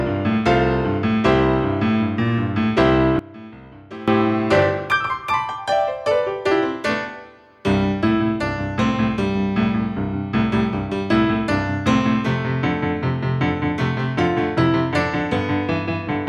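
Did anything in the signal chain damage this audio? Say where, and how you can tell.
Yes. From 3.19 to 4.08 s the sound drops by about 20 dB, with the centred content and low end largely gone. This is likely one channel inverted in the analogue wiring, so the shared content cancels when left and right are summed to mono.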